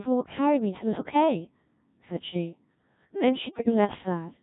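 Throughout, the speech passes through the Codec 2 vocoder at 1.3 kbit/s. Only pitch, voicing, energy and a coarse spectral envelope survive, and the decoder rebuilds the voice from sine waves, so it sounds heavily robotic and buzzy, with the original waveform gone.

From 3.52 to 3.98 s, bit errors on the digital voice radio corrupt the vocoder stream, at a rate of roughly one bit in twenty. Each flipped bit distorts a whole frame's pitch, level, voicing or spectrum, so that stretch breaks into warbling, bleeping gibberish with abrupt jumps in pitch and tone.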